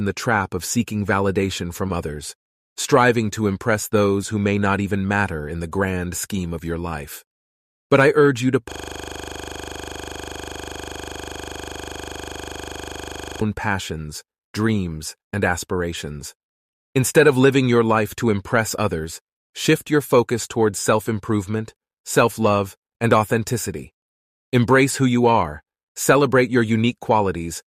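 From 8.72 s to 13.41 s a system hang loop takes over. The playback side stalled while the audio hardware kept replaying the same 40 ms stretch of its buffer, over a hundred times in a row. At 25 repeats per second the result is a rough, mechanical stutter-buzz that doesn't vary. A buffer underrun instead breaks up with gaps of silence. A skipping disc jumps between different places. Here every cycle is an identical copy.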